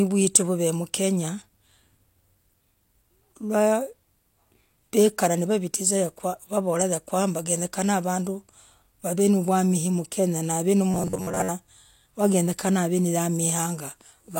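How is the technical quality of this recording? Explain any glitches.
The recording has one clear glitch. From 10.91 to 11.52 s the speech becomes a robotic sound from repeated short buffers: a rigid, metallic buzz pitched at 93.8 Hz that only loosely tracks the speech. The likely cause is audio arriving too late for playback, so the software loops the last chunk it received, here about 10.7 ms long, to fill the gaps. Roughly half the signal in that stretch is repeated material, and the matching real audio is skipped.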